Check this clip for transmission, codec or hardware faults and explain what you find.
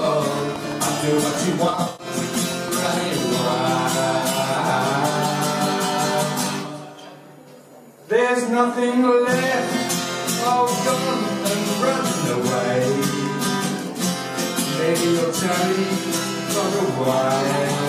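Two faults are present, both in the first four seconds, and they overlap.

From 0.06 to 3.53 s there is a train of clicks, about twenty sharp pulses at a steady 6.06 per second, peaking a few dB above the programme. Each pulse has much the same shape, which points to a likely cause in interference from nearby equipment or a struggling interface. They are heard as regular ticking that continues through quiet moments. A waveform shows evenly spaced narrow spikes, and a spectrogram shows thin full-height vertical lines.

Between 1.69 and 2.07 s there is AAC frame loss with concealment. About 213 ms of audio went missing, scattered across roughly 299 ms, which fits around ten lost frames, and the longest gap is about a tenth of a second. The decoder patched each hole from the last good spectrum, so the passage sounds smeared, noisy and slightly phasey rather than dropping out. On a spectrogram the detail blurs into frozen, grainy bands. 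The waveform envelope goes flat and lacks transients.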